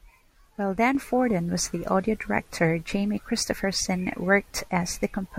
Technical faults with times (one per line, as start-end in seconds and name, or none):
0.95-5.38 sudden gain jump